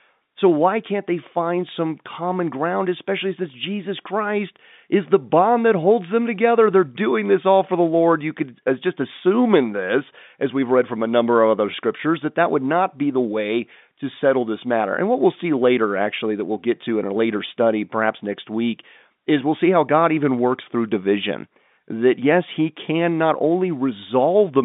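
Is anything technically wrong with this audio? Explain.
No, nothing is technically wrong: the speech sits in the expected telephone band of roughly 150 Hz to 3.7 kHz that G.711 mu-law coding at 64 kbps gives, and that path behaves as intended.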